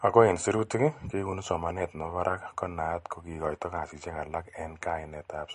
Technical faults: MP3 compression

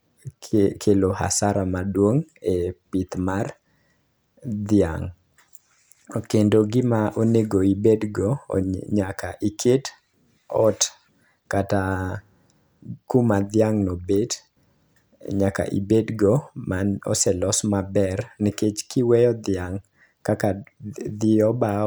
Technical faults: none

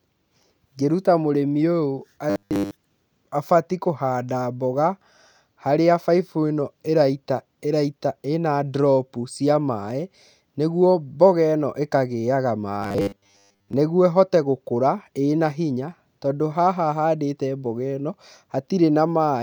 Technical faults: robotic sound from repeated short buffers

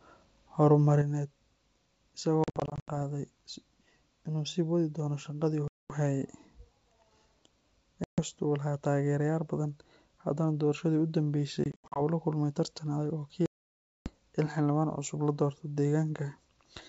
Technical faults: one channel drops out; packet loss on an ADPCM call

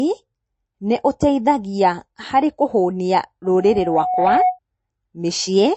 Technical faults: MP3 compression; loudspeaker feedback squeal

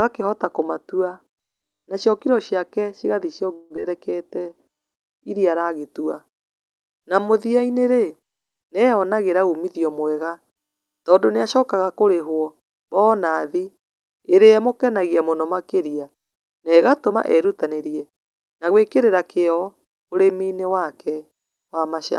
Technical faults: de-emphasis applied wrongly; long network dropout; jitter buffer slow-down; jitter buffer speed-up

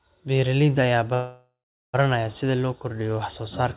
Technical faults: call audio freeze

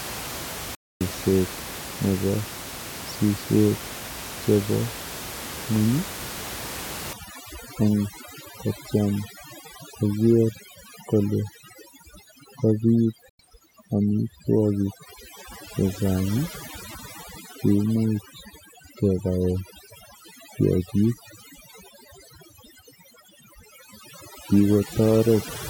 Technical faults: digital broadcast dropout; overdone noise removal

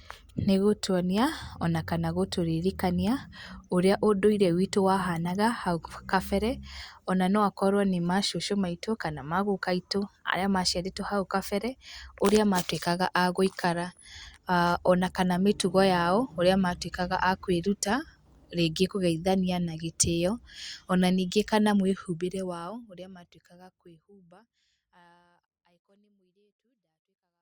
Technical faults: none

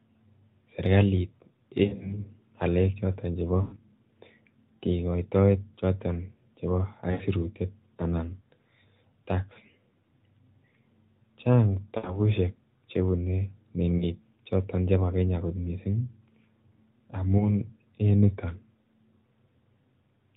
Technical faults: lost AMR speech frames

